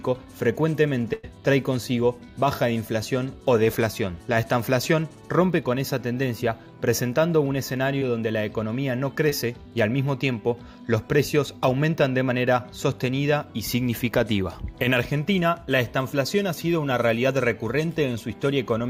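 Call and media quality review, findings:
Burst of packet loss, 1.13–1.25 s: about 100 ms of consecutive packets lost or late at the receiver jitter buffer. Concealment extends the last sound for about 96 ms, decaying into a held buzz or fading hiss. Playback resumes later, that stretch missing.

Short concealed packet loss, 7.99 s and 9.29 s: about 20 ms each missed the decoder deadline. The decoder extrapolated the preceding sound for about 22 ms, then crossfaded back into received audio. Each is heard as a brief smear or wobble.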